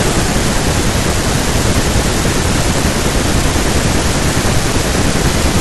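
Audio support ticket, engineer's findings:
Skip at 0.55 s and again at 4.24 s, each with a small forward jump in the speech and no silent gap. Roughly a few milliseconds missing at the first, about 5 ms at the second. Likely a dropped buffer (overrun) on the capture side: input not read before the hardware overwrote it, so the surrounding audio is spliced straight together. Unlike an underrun dropout, nothing is inserted. The sound simply skips ahead.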